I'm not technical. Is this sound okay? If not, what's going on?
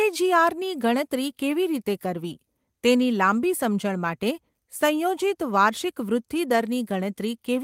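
Yes, this sound is okay, and there's nothing wrong going on.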